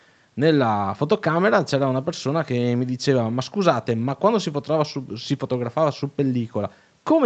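The speech carries no technical faults, with content stopping at about 8 kHz as expected from a call path's microphone processing and codec.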